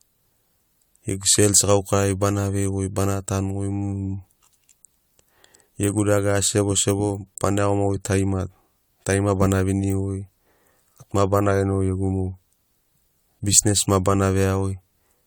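Speech running the full length of the clip carries generation loss throughout: a swirly, smeared texture with a hollow, phasey colour and softened consonant attacks, more degraded than a single pass at this quality would sound. It is likely the result of about four successive AAC-LC encode and decode cycles, at a rate consistent with 96 kbit/s. Each pass requantises on a shifted frame grid, so artefacts accumulate. Nothing is present above 20 kHz.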